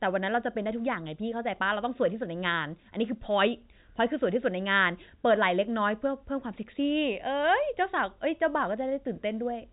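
Nothing faulty is heard in the speech, which carries the narrowband sound of G.711 A-law telephone coding, consistent with a 64 kbps line, with content stopping at 3.8 kHz.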